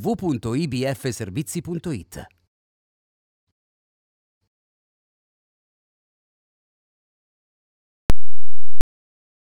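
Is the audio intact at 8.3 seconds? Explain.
No. From 8.10 to 8.81 s the sound turns into very loud, harsh distortion, and quiet parts blare as loud as the rest. The likely cause is signed and unsigned mixed up in 16-bit samples. The top bit flips, so each zero crossing jumps across the full range.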